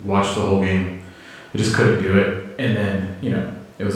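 No technical faults can be heard anywhere in this speech recording.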